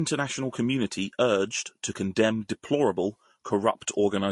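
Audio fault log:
Throughout: transcoding between lossy codecs. The speech has nothing above about 11.3 kHz, and two kinds of coding damage are heard together. The likely cause is a low-rate MP3 re-encoded as low-rate Vorbis, with the second coder spending bits on the first coder's artefacts. A single low-bitrate encode would show only one artefact character, not this mixed signature.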